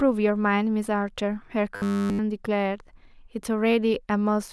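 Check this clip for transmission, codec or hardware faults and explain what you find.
One fault is audible. From 1.76 to 2.19 s the speech becomes robotic, a rigid metallic buzz near 100 Hz. Short buffers are likely repeated throughout, which fits a 10 ms buffer.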